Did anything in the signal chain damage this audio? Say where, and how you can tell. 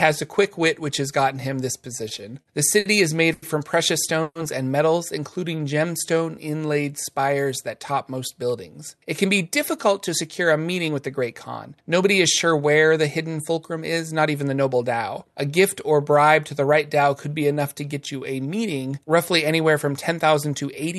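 Yes. Between 1.97 and 2.87 s the sound hitches five times, the longest about 60 ms. These are repeated stalls (stutter): the network jitter buffer kept running dry and the receiver stretched the last sound.

At 3.33 to 3.44 s one sound hangs about 90 ms too long with a slight buzz or dip. That is a short stall from a late packet, bridged by stretching.

At 4.22 to 4.37 s the sound dissolves into a fading buzz or hiss, then 40 ms of silence, then resumes. This is a call audio freeze, likely from packets held up on the network.

From 5.30 to 7.27 s the audio drags at unchanged pitch, running at 89% speed with 230 ms added. This is jitter buffer slow-down, with pitch periods repeated to rebuild the buffer's reserve.

From 8.98 to 11.23 s and 12.46 to 14.68 s it hurries at unchanged pitch, at 106% and 108% speed. This is jitter buffer speed-up, with pitch periods cut to shed excess delay. Throughout, the top end stops near 12 kHz, consistent with the Opus call codec.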